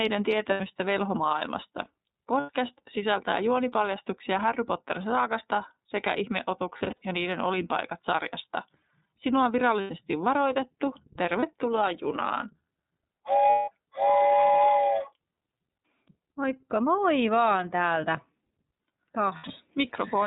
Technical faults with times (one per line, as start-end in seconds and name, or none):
0.00-20.26 iLBC codec
0.50-0.61 lost iLBC frames
2.40-2.51 lost iLBC frames
6.78-7.03 lost iLBC frames
9.81-9.91 lost iLBC frames
11.39-11.43 lost iLBC frames
13.50-13.69 lost iLBC frames
19.37-19.45 lost iLBC frames